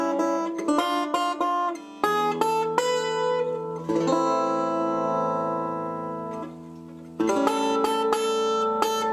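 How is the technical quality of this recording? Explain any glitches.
No technical glitches can be heard anywhere in the recording; the signal stays intact and continuous throughout.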